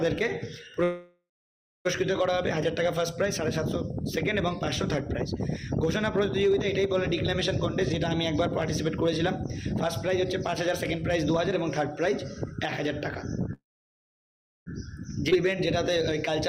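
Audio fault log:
0.83–1.87 s, call audio freeze. The sound stops and the last moment is drawn out as a fading buzz. It then falls to silence for about 0.57 s. The gap lasts about 1.0 s in all. Playback resumes where it broke off, so nothing is lost. The likely cause is packets held up in transit, which let the jitter buffer run dry. Everything after this point arrives about 1.0 s later.
8.0–12.90 s, jitter buffer speed-up. The audio runs 3% fast at unchanged pitch. The receiver trims tiny pitch-length slices, one after another, to shed excess buffered delay. Roughly 0.15 s is removed in total.
13.53–14.68 s, call audio freeze. The sound hangs again as a short fading buzz. Then about 1.04 s of silence follows, within a 1.13 s break. Nothing is missing, and the audio picks up where it stopped. Packets likely stalled on the way and starved the buffer. The added delay grows by about 1.13 s.
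15.30–15.33 s, skip ahead. Playback jumps forward with almost no gap, only about 12 ms of fill at the join. Roughly one and a half seconds of audio is gone. The two sides are spliced nearly directly. This dropped stretch cuts away most of the delay built up by the freezes.
15.35–16.29 s, jitter buffer speed-up. Right after the jump, the audio runs 11% fast at the same pitch. Small pitch-period pieces are removed repeatedly to pull the buffer down. About 0.1 s is removed, and the pace sounds clearly rushed.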